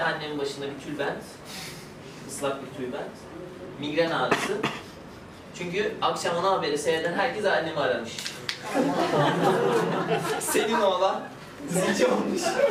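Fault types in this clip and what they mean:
No technical fault can be heard anywhere in this audio; the signal stays continuous throughout.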